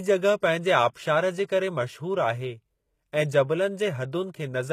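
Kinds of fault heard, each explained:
HE-AAC compression: the treble is likely rebuilt by band replication at a low bitrate near 20 kbps, so sibilants turn gritty and metallic throughout.
pre-echo: the codec spread its block's quantisation noise ahead of a sharp attack, so a 17 ms hiss leads into it at 0.94 s.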